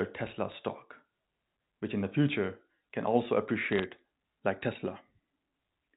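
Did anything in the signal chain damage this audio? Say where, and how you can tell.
Yes. Two short bursts of crackle sit over the speech, one at 0.52 to 0.55 s and a denser one at 3.72 to 3.84 s, where the ticks come thicker. These are bit errors on a digital phone line, at the network stage. On this G.711 A-law link each flipped bit corrupts a single sample, and hits on the sign or upper bits throw that sample far off, giving a sharp tick. The speech around the ticks stays intact.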